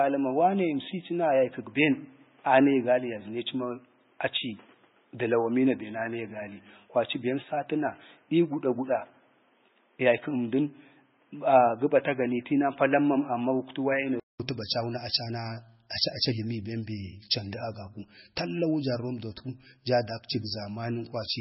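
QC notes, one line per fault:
Throughout: MP3 compression. Nothing remains above 5.6 kHz, so the top of the speech is gone. Weak frequency detail flickers in and out from frame to frame, giving a watery, swirling texture. S sounds turn metallic and chirpy, and consonant attacks smear. This is likely a heavily squeezed MP3 stream. The encoder ran short of bits, cut the treble at a fixed point and dropped quiet components. The damage fits a very low bitrate, near 17 kbps.
0.0 to 14.4 s: input switched to a poorer device. The speech sounds dull and boxy, with nothing above 3.8 kHz. A new noise floor sits roughly 35 dB below the speech. At 14.4 s there is a 200 ms silence, then the sound opens up to the wider band. Loudness stays about the same across the switch. The likely cause is the recording path starting on a narrower-band microphone or headset call profile, then changing to a better input.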